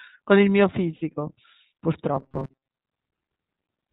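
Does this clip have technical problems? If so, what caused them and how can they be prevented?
Yes. iLBC codec damage runs through the whole speech clip: nothing above 4 kHz survives, and the voice has a plainly audible rough, synthetic edge from excitation coded frame by frame, which fits iLBC's 30 ms mode at about 13.33 kbps. A wider-band codec at a higher bitrate would prevent this.

Lost iLBC frames at 0.96 to 1.02 s leave a 60 ms gap, matching two dropped 30 ms frames. The decoder fills it by repeating the last pitch cycle mixed with noise, so it sounds like a held, buzzy vowel before the voice recovers almost immediately. A jitter buffer with forward error correction or retransmission on the network path would prevent this.

Robotic sound from repeated short buffers spans 2.14 to 2.76 s. It is a rigid metallic buzz at 134 Hz that loosely tracks the speech while most of the real audio there is skipped. 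The likely cause is a playback stage starved of new data that kept replaying its last block, which fits a block of about 7.5 ms. Larger audio buffers and higher scheduling priority for the audio thread would prevent this.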